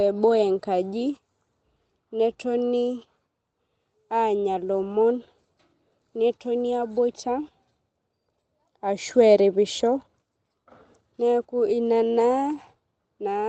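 No technical faults can be heard in the speech; it comes through a call connection whose audio tops out around 8 kHz.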